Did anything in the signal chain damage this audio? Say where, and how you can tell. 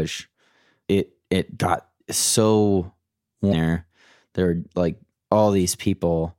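Yes, at the codec stage: damaged data in a compressed stream produces a brief glitch from 3.49 to 3.53 s, right after "it got so". Corrupt frames garble the decoder's output until it resyncs.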